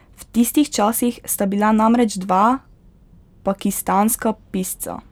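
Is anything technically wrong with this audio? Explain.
No, nothing is technically wrong with this audio.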